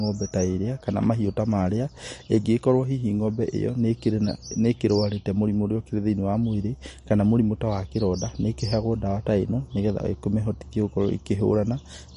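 Throughout the speech, the audio carries plainly audible damage of the kind left by MP3 compression, likely from an encoder starved of bits, which fits a rate around 40 kbps. Nothing remains above 10.6 kHz, and weak spectral detail flickers in and out between frames, giving a watery, swirling texture with chirpy s sounds and smeared onsets. A simple low-pass filter would dull the top without that warbling, frame-by-frame instability.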